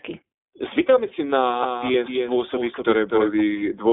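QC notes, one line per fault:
Throughout: iLBC codec. The sound is squeezed into a phone band of roughly 250 Hz to 3.6 kHz, with nothing on top, and each frame is coded on its own, leaving a plainly rough, slightly synthetic edge. This fits iLBC's 15.2 kbps, 20 ms frame mode.
1.63 to 3.41 s: doubled audio track. A second, full-band copy of the audio runs about a third of a second behind, around 5 dB quieter. It is dry, with no room tail, and switches in and out abruptly, likely a second capture path or a misaligned edit.
1.92 to 1.96 s: lost iLBC frames. A brief dropout gets filled by the decoder repeating the last pitch cycle with some noise, so it comes out as a short, buzzy held vowel. This fits a single 20 ms frame, and the sound recovers straight after.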